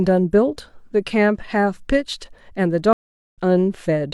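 At 2.93 s a stream reconnect leaves about 0.41 s of silence; playback returns at 3.38 s roughly 0.3 s further on, skipping that stretch of speech.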